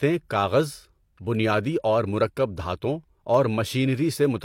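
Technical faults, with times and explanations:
2.84 to 4.34 s: periodic USB or driver dropouts. A regular tick repeats every 0.5 s, about four times in this stretch of speech. Each time, a tiny fraction of a millisecond of audio is skipped outright rather than replaced by silence. The waveform jumps where the missing piece should be, and that break is heard as a click. A background task stalling the USB bus or audio driver at a fixed interval explains the even spacing.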